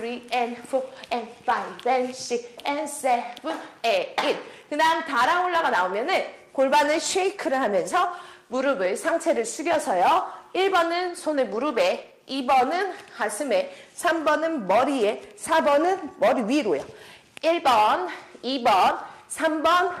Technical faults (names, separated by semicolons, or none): call bitrate drop